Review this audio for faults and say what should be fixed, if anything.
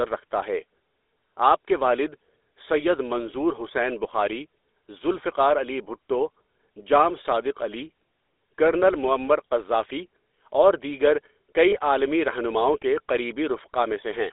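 The speech has passed through the GSM full-rate codec, consistent with the 13 kbps full-rate coder, which rebuilds the voice from a vocal-tract model excited by a sparse, regularly spaced pulse train. With so little of the excitation kept, the voice takes on a buzzy, gravelly roughness that is plainly audible throughout, and the telephone line band confines everything to roughly 300 Hz to 3.6 kHz, leaving it thin and muffled. To prevent this, carry the call over a wideband or higher-rate codec such as AMR-WB or Opus instead of legacy GSM full rate.

Between 11.70 and 11.76 s there are lost GSM frames. The gap is short enough to fit a single missing 20 ms frame, which the decoder concealed by reusing the previous good frame's parameters. Rather than a dropout, the sound briefly holds on a rough, metallic ring before normal decoding resumes. To prevent this, improve the radio or transport link's error protection, or add redundancy so a damaged frame can be recovered instead of concealed.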